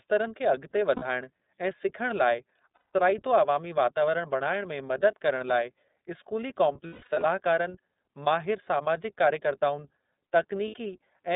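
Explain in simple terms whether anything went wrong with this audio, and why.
Yes, two things went wrong. The whole recording sounds thin, slightly rough and a bit robotic, as if heard through an old phone line, with nothing bright or crisp above roughly 4 kHz. That comes from the iLBC codec, a phone-call speech codec that squeezes each 30 ms slice of the voice on its own and throws away the higher frequencies. Here its damage is plainly audible.

In four places the voice briefly turns into a held, buzzy or breathy hum: at 0.96 s, just after "खे अॻिते" and before "ऐं सिखण", for about 60 ms; at 2.75 s for about 180 ms; from 6.87 to 7.23 s, right after "करण लाइ स्कूली", as a broken-up stretch whose longest gap is roughly 150 ms; and at 10.68 s for about 60 ms. These are lost iLBC frames. Pieces of the call went missing, and the decoder filled each hole by repeating the last bit of voice mixed with noise. 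Because every frame stands alone, the voice comes back clean almost immediately afterward.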